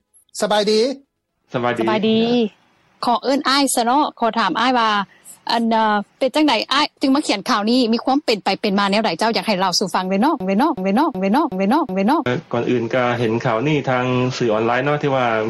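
From 10.40 to 12.26 s, a system hang loop. The system froze while the hardware kept replaying its ring buffer. A 0.37 s slice repeats five times, about 2.7 per second, a stuttering judder. That fits a 16384-sample buffer. Roughly two seconds are lost.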